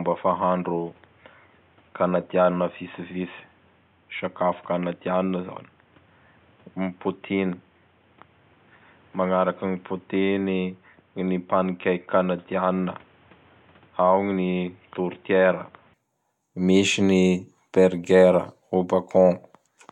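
From the start until 15.94 s the speech is narrowband and boxy, with nothing above 3.8 kHz, a level a few decibels lower, and a faint added noise floor well beneath it. The likely cause is an input switched to a poorer device, its narrower band, tone and noise replacing the original path. A spectrogram shows a hard ceiling at 3.8 kHz that lifts abruptly at 15.94 s with no gap, while the waveform grows slightly taller there.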